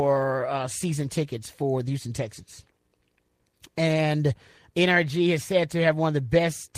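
Nothing in the signal of this speech recording shows any technical fault at any point.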